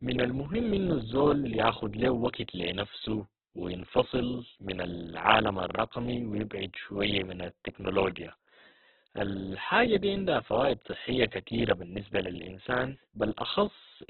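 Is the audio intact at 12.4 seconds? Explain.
No, 12.4 s falls within Opus compression affecting the whole clip: nothing above 4.2 kHz, and speech sounds grainy and rough, likely from starved bands being noise-filled at roughly 8 kbps.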